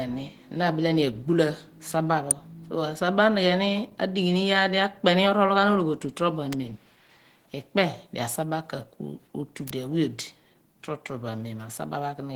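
Opus voice compression runs through the whole speech clip, with plainly audible damage that fits a hybrid-mode stream near 16 kbps. SILK codes the low band coarsely and CELT thinly fills the top, so the speech turns hoarse and faintly robotic. A spectrogram shows smeared, blocky upper harmonics changing in 20 ms steps.

An electrical switching spike follows "ni agbula saba pho" at 2.31 s, with two more at 6.53 s and 9.68 s. Each is a sharp snap or tight cluster of clicks, likely from a nearby switch arcing onto the line. The waveform shows a narrow vertical spike, and the spectrogram a thin full-height stripe.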